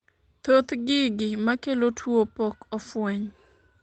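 At 2.03 to 2.05 s there is a lost packet rebuilt from error correction: a single 20 ms stretch of the speech comes through rougher and noisier than its surroundings, with no dropout or silence. The original packet never arrived, so the decoder played the reduced-quality duplicate carried inside the following packet. The coarse, grainy texture comes from that lower-rate copy. The band above 8 kHz is already missing throughout, which points to Opus at around 24 kbps.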